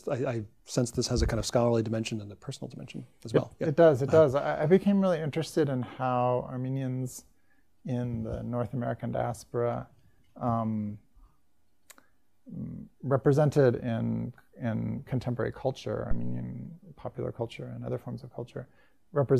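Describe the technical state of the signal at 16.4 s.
At 16.4 s you're inside a phantom power thump running from 16.11 to 16.52 s. A supply switched on or off on the live input sends a voltage step through the coupling capacitors, giving a deep thump peaking around -16 dBFS and dying away over about 93 ms.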